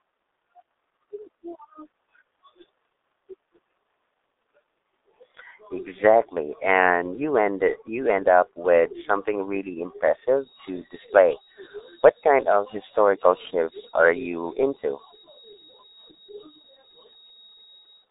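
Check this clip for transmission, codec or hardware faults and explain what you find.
One codec fault runs through the whole clip: G.723.1 codec damage, and it is heavy. The speech is band-limited. Almost nothing reaches below 250 Hz or above 3.7 kHz, and nothing at all sits above 3.8 kHz. The codec rebuilds speech from a coarse vocal model that updates only once per long frame. That slow update smears fast changes. Consonants blur, and the voice turns muffled and hoarse. The coarseness fits a rate of about 6.3 kbit/s.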